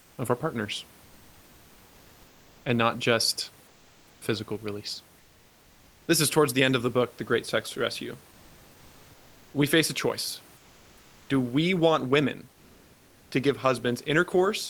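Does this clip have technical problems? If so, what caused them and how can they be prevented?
Yes. The sender's voice detector likely treated the pauses as silence and stopped transmitting, so the receiver played comfort noise in place of the background at 0.01–0.17, 3.67–4.21, 5.19–6.07, 8.31–9.53, 10.57–11.29 and 12.53–13.31 s. During these pauses the room noise becomes a flat, featureless hiss. Its level shifts by anywhere from about 5 dB quieter to about 2 dB louder. Turning off discontinuous transmission at the sender keeps the real background throughout.

From 4.17 to 4.21 s, the same detector was likely slow to notice that speech had resumed. The first 40 ms were never sent, and comfort noise filled the gap, so the onset arrives abruptly without its soft beginning. Giving the voice detector look-ahead prevents this, as does disabling discontinuous transmission.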